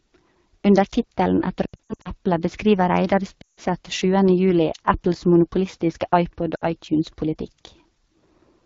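Throughout, the speech passes through the AMR wideband (HD Voice) codec at a very low rate. The model-based coder cannot track the vocal tract closely at that rate, so the voice sounds rough and raspy with a noisy top band. This fits one of AMR-WB's two lowest bitrates.

From 1.65 to 2.10 s, then 3.42 to 3.60 s and 6.55 to 6.65 s, lost AMR speech frames force the decoder to extend its last good settings with falling gain. The first stretch holds scattered dips and warbles lasting up to 80 ms. The second drops to near silence, the third is a brief 60 ms gap.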